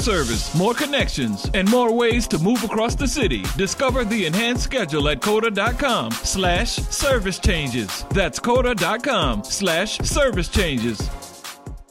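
No technical faults are audible anywhere in this audio.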